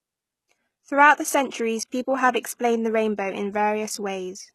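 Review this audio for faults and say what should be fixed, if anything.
Throughout the speech, s sounds come out gritty and lispy, and nothing is heard above 12.3 kHz. The upper band sounds rebuilt rather than captured, likely from HE-AAC compression copying lower bands upward, at a rate that points to about 16 kbps. Encode at a higher bitrate or with a full-band codec.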